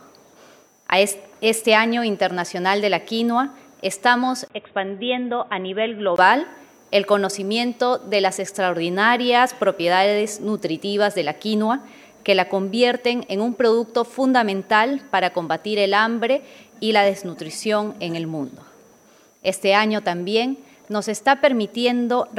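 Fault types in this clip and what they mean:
Input switched to a poorer device: From 4.48 s to 6.18 s the sound turns dull and boxy, with nothing above 3.8 kHz, a level drop of about 5 dB, and a new background noise floor about 35 dB below the signal. A 20 ms silence marks the switch. This narrowed band, changed tone and fresh noise likely come from the input moving to a lesser microphone or a headset call profile before switching back.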